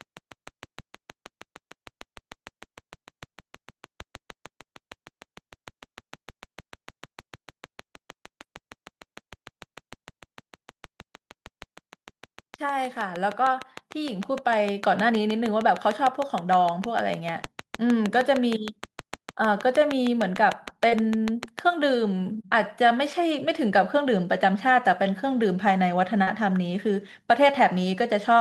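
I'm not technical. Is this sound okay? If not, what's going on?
No. A few things are going wrong here.

The first is a train of clicks running from the very start until about 21.6 s. It's a steady ticking, roughly six and a half clicks a second and around 150 in all, sitting on top of the speech and still audible in the pauses. The clicks are evenly spaced and alike, and the likely culprit is electrical interference from nearby equipment or a faulty connection or power supply.

There are also four moments of short concealed packet loss, at 8.41, 20.89, 22.41 and 26.23 s. In each, a sliver of the call arrived too late to use, and the receiver papered over the gap by stretching out whatever sound came just before, then blending back in. Three gaps are about 20 ms; the one at 26.23 s is about twice that. You'd hear a quick smear or wobble, and a short consonant can vanish.

Finally, there's automatic gain rising between about 12.59 and 14.93 s. 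The automatic gain control decided the input was too quiet and turned itself up gradually over those two-odd seconds. The speech and the background noise swell louder together, like someone slowly nudging up a volume knob.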